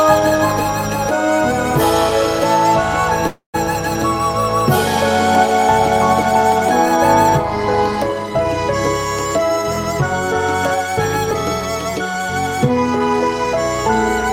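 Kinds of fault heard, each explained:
call audio freeze: From 3.27 to 3.56 s the last sound is stretched into a fading buzz, ending in about 120 ms of silence before the audio resumes where it stopped, likely because delayed packets emptied the jitter buffer. A spectrogram shows smeared horizontal bands thinning to a blank gap.
jitter buffer speed-up: From 12.70 to 13.55 s the audio runs at 111% speed without a pitch change, as the receiver trims short pitch-period pieces, about a tenth of a second in total. On a spectrogram the harmonics keep their spacing while events arrive closer together.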